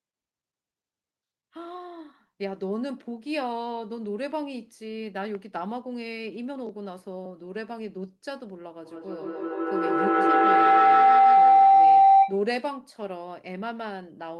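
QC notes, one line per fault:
5.35–5.37 s, loud pop: a single sharp pop, peaking roughly 10 dB above the speech, sits on top of the sound while the speech carries on beneath it. This is likely a sudden voltage pulse, such as static or a switching glitch.
8.85–12.51 s, feedback howl: a tone near 700 Hz builds to about 15 dB above the speech, pulsing roughly every 150 ms. A microphone-to-loudspeaker loop is gaining level on each pass, so repeats grow and narrow to the loop's favoured frequency until broken.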